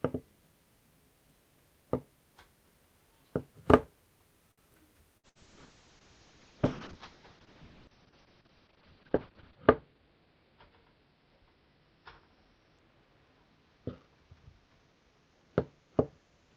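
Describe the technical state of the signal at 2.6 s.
At 2.6 s the audio is intact, with no dropout, clipping, glitch or other fault to be heard at that point.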